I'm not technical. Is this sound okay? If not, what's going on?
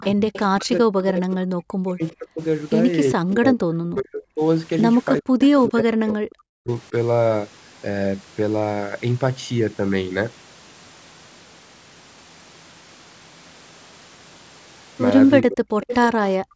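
No. Three call-related problems can be heard.

Echo leak: at 0.0 to 0.4 s, around 5.4 s, and at 15.83 to 15.95 s, a faint copy of the voice trails about 0.4 s behind, likely because the other side's echo canceller let some loudspeaker sound back into its microphone.

Speech suppressed in double talk: at 0.0 to 2.41 s, 3.15 to 4.42 s, 5.2 to 6.92 s and 15.42 to 15.86 s, the voice sharply drops away in pieces, likely because both sides spoke at once and the echo canceller turned the talker down.

Background gated by the echo canceller: in the final moment, from 16.39 s to the end, the room sound suddenly cuts out almost entirely. The echo canceller clamped the microphone while the loudspeaker was playing.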